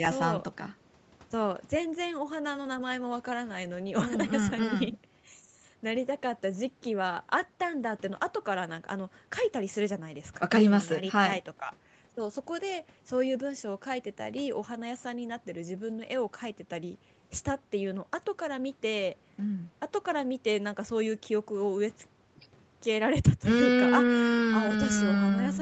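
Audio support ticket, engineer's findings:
No faults found in this speech.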